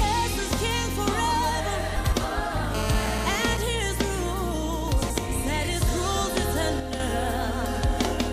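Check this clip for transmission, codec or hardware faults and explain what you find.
Three kinds of fault are present: frames out of order twice, a GSM phone buzz, and a sudden gain jump.

Frames out of order, 1.97 to 2.13 s and 5.02 to 5.18 s: two adjacent blocks of about 78 ms, which fits three frames each, were decoded in swapped order. Each stretch sounds like a brief garbled flutter. A spectrogram shows vertical discontinuities at the three seams, and no time is lost.

GSM phone buzz, 2.75 to 3.57 s: a nearby 2G handset on a call pulses at 217 Hz, and the audio circuitry rectifies those radio bursts. The result is a harsh, steady rasp about 6 dB below the signal. A spectrogram shows evenly spaced horizontal harmonic lines at multiples of 217 Hz. The waveform shows a regular comb of spikes.

Sudden gain jump, 6.8 to 7.0 s: the level drops by 6 dB from one sample to the next and then returns, with the background noise falling along with the sound. 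The likely cause is a gain setting applied without a ramp. The waveform envelope shows a sharp rectangular notch.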